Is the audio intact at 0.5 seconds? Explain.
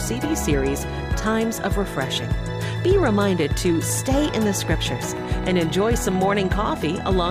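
Yes, at 0.5 s the audio is intact, with no dropout, click, distortion or other fault at that moment.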